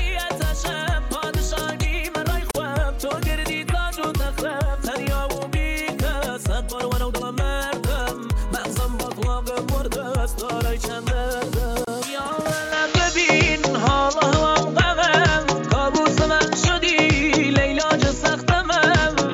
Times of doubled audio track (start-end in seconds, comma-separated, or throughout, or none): none